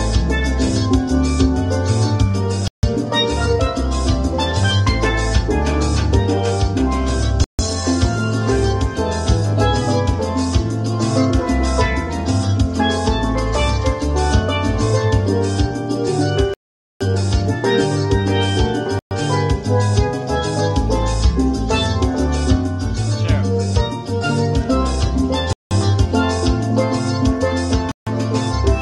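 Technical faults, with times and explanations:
2.68 to 28.07 s, Bluetooth stall: the wireless link likely lost packets to interference, so the headphones' buffer emptied before retransmissions arrived and playback froze. The sound drops to sudden silence, then resumes mid-flow, at 2.68 s (0.15 s), 7.44 s (0.15 s), 16.54 s (0.47 s, the longest), 18.99 s (0.12 s), 25.53 s (0.18 s) and 27.92 s (0.15 s). The cuts are hard and leave no fade or smeared tail, consistent with a starved buffer rather than a level change.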